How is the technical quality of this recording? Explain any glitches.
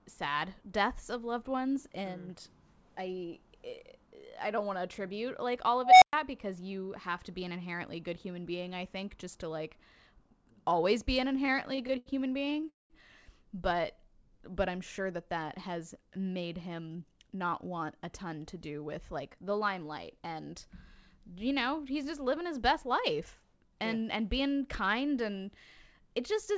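The recording has five distinct glitches, all between about 5.8 and 17.4 s. The audio stops at 8 kHz, which fits a wideband call codec such as G.722.

From 5.83 to 6.13 s, an unstable filter produces a tone near 700 Hz that swells for about 0.19 s and then cuts to 112 ms of silence. Feedback would not end in silence like that.

From 11.36 to 12.66 s, repeated stalls (stutter) occur: thirteen short gaps, the longest 82 ms, add 248 ms of filled sound. Nothing is lost, so the speech drags rather than skips.

From 12.69 to 12.93 s, there is a call audio freeze. The sound holds and fades, and 160 ms of the 209 ms fill is silence, likely caused by delayed packets. Unlike a dropout, no speech is missing afterwards.

From 13.96 to 14.51 s, a jitter buffer slow-down plays speech at 94% speed, stretching it by 36 ms. The pitch stays unchanged, unlike a tape slowing down.

From 16.66 to 17.35 s, a jitter buffer speed-up runs speech at 110%, trimming roughly 70 ms. 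The pitch holds steady, so it sounds hurried rather than raised like a sped-up recording.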